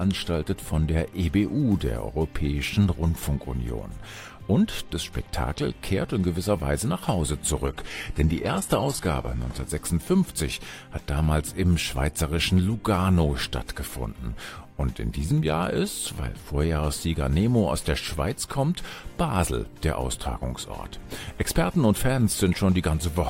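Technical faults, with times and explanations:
7.66–9.66 s, adaptive stream at a lower bitrate: treble drops suddenly and is cut off above 12.3 kHz, with no gap, which fits low-bitrate HE-AAC. On a spectrogram, the top of the spectrum drops to a flat ceiling.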